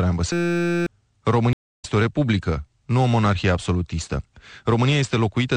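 Throughout, a watery, swirly texture with dulled treble and smeared attacks points to MP3 compression, likely at a low bitrate around 64 kbps, rather than simple filtering. From 0.33 to 0.87 s, a system hang loop repeats a 5.8 ms fragment as a steady 172 Hz buzz, which fits a 256-sample buffer; unlike a stutter, it is a pitched tone, and about half a second of sound is lost. From 1.53 to 1.85 s, a stream reconnect leaves about 0.3 s of silence, then the sound resumes roughly 0.2 s further on, so it skips ahead rather than picking up where it stopped.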